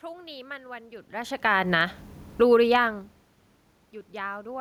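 From 1.1 to 3.13 s, automatic gain rising: the gain control judged the input too quiet and lifted it by about 4 dB, so voice and room noise swell together. Between 2.26 and 2.58 s, automatic gain falling cuts in: the control finds the input too loud and pulls gain down by about 6 dB, sinking speech and background at once.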